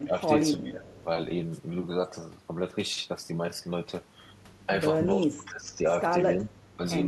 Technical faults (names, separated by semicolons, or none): speech suppressed in double talk; echo leak